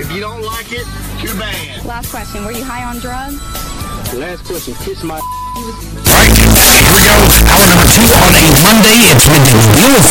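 Signed and unsigned mixed up, from 6.06 s to the end at 10.10 s: the sound abruptly turns into very loud, harsh distortion, and quiet moments blare as loudly as everything else. The likely cause is 8-bit samples being read with the wrong sign convention, flipping the top bit so that every crossing of zero becomes a jump across the entire range.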